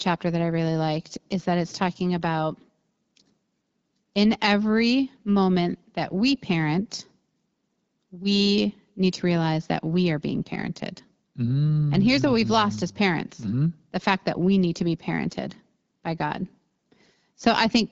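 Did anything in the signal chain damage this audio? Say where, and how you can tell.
No, nothing in the chain has damaged this speech; it comes through an AMR wideband (HD Voice) link at 12.65 kbit/s, which keeps it clear, with only the light coding character that rate leaves behind.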